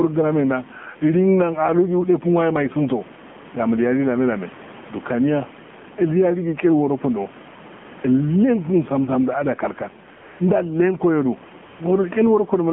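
From the start and all the way through, the level keeps breathing. The level ducks under each loud syllable, with around 10 dB of swing, so loud and soft parts sit close together and everything feels squashed. That's gain pumping. The likely cause is the input gain set far too high, with a fast limiter or compressor clamping down on every peak and then letting go. The room noise sits normally about 30 dB under the speech.

Also present throughout is the AMR narrowband mobile codec. The speech is confined to a phone band of roughly 150 Hz to 3.4 kHz, with nothing up top, and the damage is plainly audible: a buzzy, synthetic edge on the voice and a watery warble where the background comes through. That character fits one of the lower AMR-NB modes, around 7.4 kbps, where the vocal-tract model has only a few pulses per subframe to work with.

Then, at 10.16 to 10.40 s, just before "ilnen ko", the real background drops out and a smooth, steady hiss takes its place for about a quarter of a second before switching back. 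It happens again at 11.64 to 11.80 s. That's AMR comfort noise: the phone decided nobody was talking, stopped sending speech frames, and the far end filled the hole with synthetic noise built from a rough level and spectrum sketch.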